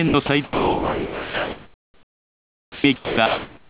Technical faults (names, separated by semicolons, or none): sound dropped by the voice detector; comfort noise in place of the background